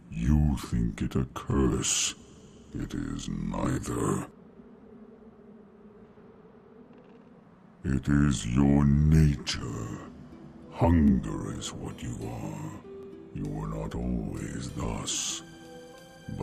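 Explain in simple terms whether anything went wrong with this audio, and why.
Yes. Bluetooth stutter: brief repeated slices at 1.51, 3.72 (longer, about 46 ms), 11.08 and 13.03 s, where late audio packets were covered by replaying the previous 23-ms chunk.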